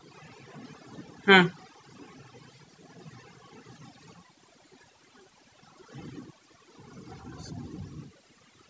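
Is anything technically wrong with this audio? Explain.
Yes. Overdone noise removal affects the whole speech clip. A noise reducer set too strong pulls individual frequency bands far down whenever they sit near its noise estimate. Quiet parts of the voice vanish with them. The background in the pauses drops and breaks up into twinkling specks.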